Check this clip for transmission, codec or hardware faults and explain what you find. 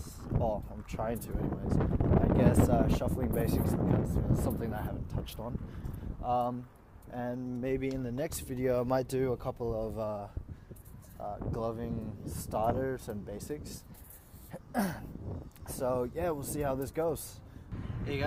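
No faults turn up in this clip.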